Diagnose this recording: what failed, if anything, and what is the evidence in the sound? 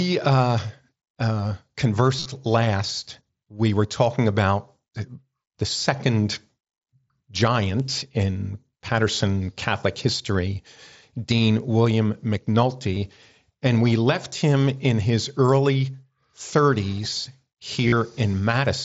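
Concealed Bluetooth headset packet loss, at the wireless link between headset and phone. At 2.19–2.26 s, just before "last we were talking", about 45 ms of the 60 ms span is missing and is patched with repeated waveform. The longest run is 22.5 ms. Shorter patches follow at 12.94–12.97 s and 17.88–17.92 s, each a brief held buzz with a slight warble as the real audio resumes.

Bit error spikes, a digital storage or transfer fault. There are single sharp broadband ticks at 7.80 s, spanning two samples, and at 11.60 s, a single sample. Each is unrelated to the surrounding sound: a flipped bit briefly throws the sample value by a power of two before it snaps back. The mSBC wideband band limit is audible underneath.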